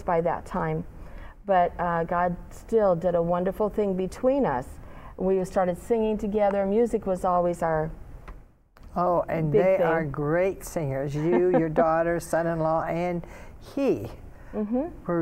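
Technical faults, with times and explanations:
No technical faults can be heard anywhere in the audio, and the signal stays steady and intact throughout.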